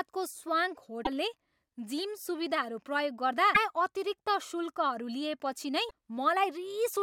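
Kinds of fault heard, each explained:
Damaged data in a compressed stream: a few stretches of the encoded speech got corrupted, so the decoder couldn't make sense of those frames, lost its footing and had to hunt for the next valid frame header before carrying on. You hear it as brief glitches breaking through the speech, at 1.02 to 1.08 s, 3.54 to 3.57 s and 5.87 to 5.91 s, each only a few tens of milliseconds long.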